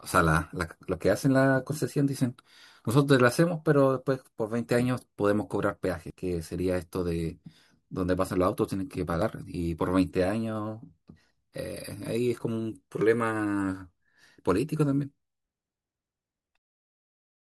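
Dropped buffer (overrun), likely, at 6.10, 9.22 and 13.01 s: samples were overwritten before being read, so the speech jumps ahead, losing about 100 ms, then roughly 40 ms twice.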